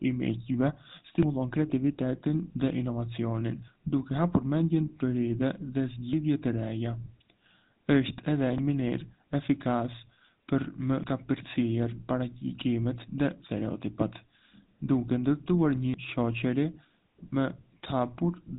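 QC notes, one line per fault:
Throughout, GSM full-rate codec: a plainly audible buzzy, gravelly roughness and nothing above 3.8 kHz, the sound of pulse-driven vocal-tract modelling at a bitrate consistent with about 13 kbps.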